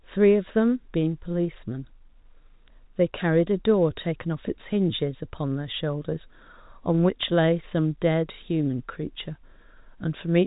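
No technical faults can be heard in this speech, which carries the band-limited sound of G.711 A-law telephone coding, with nothing above 4 kHz and at most a faint level-following quantisation hiss beneath it.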